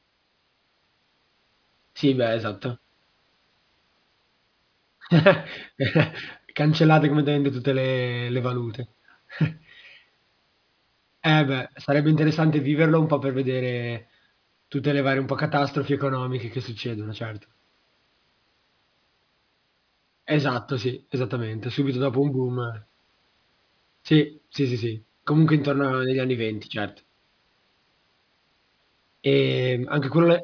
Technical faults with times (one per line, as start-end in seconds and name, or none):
0.00-30.43 aliasing